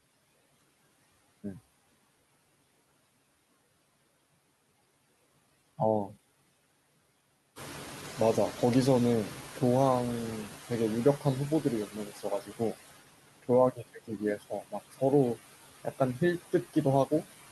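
A speech recording with noise suppressor artifacts throughout. The background is pulled down by about 17 dB, so residual noise sinks between phrases and rises under them. At 5.17 to 5.19 s there is a skip ahead. Roughly a second of speech is gone, and the two sides are joined with no gap. A jitter buffer speed-up follows from 5.27 to 6.25 s. Speech runs at 113% with unchanged pitch as around 150 ms is trimmed to shed the built-up delay. The room noise jumps by about 12 dB near 7.5 s, and the noise suppressor is caught catching up. From 7.55 to 11.94 s the louder noise leaks through with only about 9 dB of reduction, fading as the estimate adapts over 4.4 s. Speech is then cut by the noise suppressor three times, at 11.87 to 12.24 s, 12.41 to 12.75 s and 13.71 to 15.02 s. Parts drop by about 12, 14 and 18 dB and sound swallowed.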